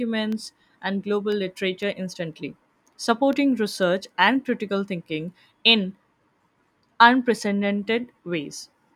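From about 0.32 s to 3.83 s, the speech carries a train of small, evenly spaced ticks, one every 0.5 s, stopping just before "and critical thinking in". These are periodic USB or driver dropouts. At a fixed interval, something stalls the USB bus or the audio driver, and each time a tiny fraction of a millisecond of samples is replaced by silence. That abrupt gap in the waveform is what clicks.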